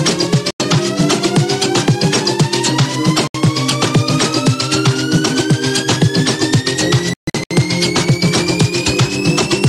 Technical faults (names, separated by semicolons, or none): Bluetooth dropout